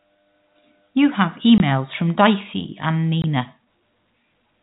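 At 1.58 to 1.60 s and again at 3.22 to 3.24 s the speech cuts out for 20 ms. That's packet loss filled with silence: each gap fits one lost 20 ms packet swapped for nothing, so it breaks off with hard edges against the narrowband G.711 telephone sound.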